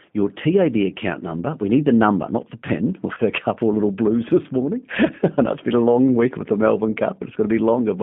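Speech passes through a G.729 codec for the whole clip, confined to a narrow line band of roughly 150 Hz to 3.5 kHz at 8 kbit/s. The damage is plainly audible as a rough, slightly synthetic texture. That texture comes from the decoder rebuilding each 10 ms frame from a filter, a pitch estimate and a handful of pulses, not from the original waveform. This separates it from simple telephone band-limiting, which dulls the sound without adding that buzzy, pulse-built graininess. From 3.15 to 3.20 s, VoIP packet loss concealed by the speech codec shows up as a brief stretch where the decoder keeps extending its last pitch and filter at falling level. This produces a short stretched, fading sound in place of the missing sound, and the loss fits a single 20 ms packet. Because each decoded frame leans on the previous one, the distortion lingers past the gap. A plain dropout would leave silence or a click, not this synthesised tail.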